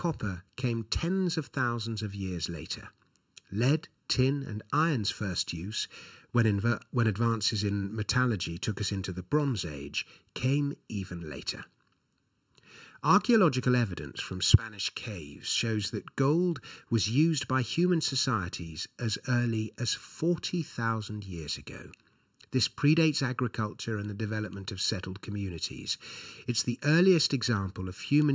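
One channel of this speech recording arrives a fraction of a millisecond late, and summing the two to mono produces channel delay (comb filtering) throughout. Cancellation begins around 700 Hz and repeats at evenly spaced notches up the band, leaving the voice hollow and phasey from start to finish, within a call-processed range that stops at 8 kHz.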